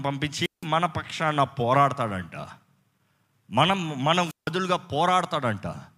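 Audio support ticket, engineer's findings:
Speech cuts to a brief hiss, then near silence, at 0.41–0.66 s (about 170 ms muted) and 4.25–4.51 s (about 160 ms muted). Wireless microphone squelch dropout: RF fade on the analogue FM link, receiver squelch muting output.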